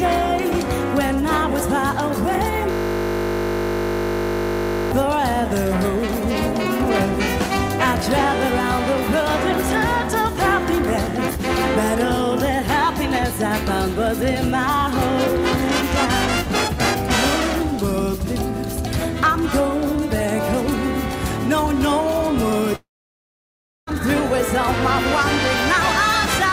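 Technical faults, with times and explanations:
2.71–4.92 s, system hang loop: one 20 ms piece repeats about 110 times, a steady 50 Hz buzz; the spectrogram shows evenly spaced 50 Hz harmonics, and the waveform shows identical cycles.
22.75–23.90 s, long network dropout: the sound smears briefly, then about 1 s of near-silence shows as a blank spectrogram band, likely lost packets with roughly 1.1 s missing.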